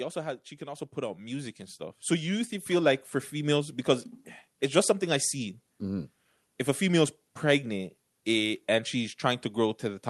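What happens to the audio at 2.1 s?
At 2.1 s the clip is in the middle of an automatic gain rising, which runs from 0.58 to 3.83 s, starting just after "also has she". The automatic gain control judged the input too quiet and pushed its gain up step by step, by about 10 dB over those three-odd seconds. The speech and the background therefore swell together, so the loudness creeps upward rather than changing at once. Through the Opus call path, the sound stays capped at around 12 kHz.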